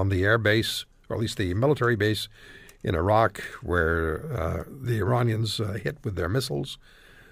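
Listening through the speech, nothing stood out as a technical problem at any point.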